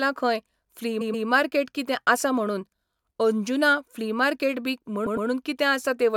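Speech with two bursts of repeated frames: at 1.00–1.26 s, just before "मार्केट कितें आसा म्हणून", a 128 ms block plays twice more, adding 256 ms; at 5.06–5.27 s, after "फ्ली मार्केट बी", a 106.7 ms block repeats twice, adding 213 ms. Both stutter, and a spectrogram shows identical patches side by side.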